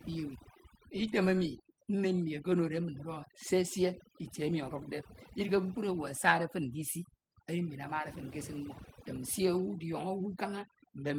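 Throughout the speech, overdone noise removal gates frequency bands near the noise estimate, leaving near-silent gaps with twinkling specks; a spectrogram shows blotchy holes, while the lightly coded Opus content reaches about 20.2 kHz.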